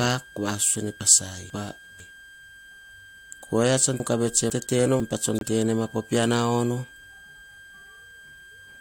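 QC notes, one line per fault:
Throughout: switching supply whistle. A thin high tone sits under the speech the whole way, wandering between roughly 1.59 and 1.61 kHz, at about 25 dB below the speech. That slight drift is what marks it as a power supply running in an audible burst mode or beating against another one, and not a fixed-frequency test tone or mains hum. Hum sits far lower and holds a steady pitch with its harmonics; this tone wanders with the load.
1.0 to 2.0 s and 4.0 to 5.0 s: chunks out of order. In each span two half-second pieces of speech play in swapped order, the earlier piece arriving one chunk late, after the piece that should follow it. The second span begins just after "oyia tsan". The speech jumps backward for a moment, with three hard joins per span. None of the sound is missing, and the span keeps its overall length. That full content with jumbled order separates it from dropouts or skipped audio.
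5.38 to 5.43 s: corrupt frame muted. A hole of about 50 ms cuts in abruptly, the length of three compressed frames that the decoder rejected as damaged. The player filled them with silence. The speech around it keeps its timing, so nothing shifts or jumps as it does with reordered chunks. The clean digital silence, with no smearing or repeated sound, points to muting and not to concealment by repeating or interpolating audio.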